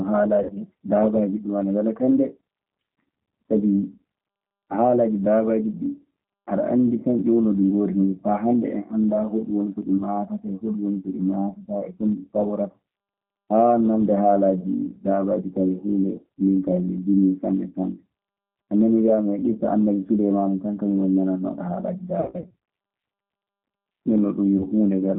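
G.729 codec damage runs through the whole speech clip. The line is held to roughly 150 Hz to 3.4 kHz at 8 kbit/s, and each frame is rebuilt from a vocal tract filter, pitch predictor and a few pulses, so the voice sounds plainly rough, thin and synthetic.

VoIP packet loss concealed by the speech codec strikes at 0.43–0.53 s (60 ms lost), 9.97–10.03 s and 24.58–24.65 s (20 ms each), and 22.20–22.54 s (260 ms scattered, longest run 80 ms). The decoder stretches its last pitch and filter into a fading buzzy tone or coloured noise, and recovery stays weak afterward.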